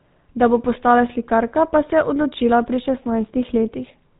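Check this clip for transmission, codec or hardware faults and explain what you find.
One fault is present, and it runs through the whole speech clip. It is GSM full-rate codec damage, and it is plainly audible. The codec models the vocal tract as a filter. It drives that filter with a sparse train of regular pulses rather than the real excitation. That coarse pulse source gives the voice a buzzy, gravelly roughness throughout. Nothing is left above 3.8 kHz, so the sound is dull and narrow. The damage points to a GSM full-rate link at 13 kbps.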